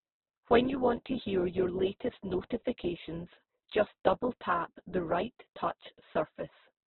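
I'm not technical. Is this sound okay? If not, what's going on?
No. Opus compression, heard throughout the whole clip, is the likely cause: the speech was squeezed so hard that nothing above about 4.1 kHz survives, which makes it sound muffled. Missing detail gets filled in with noise, so the voice turns rough and grainy.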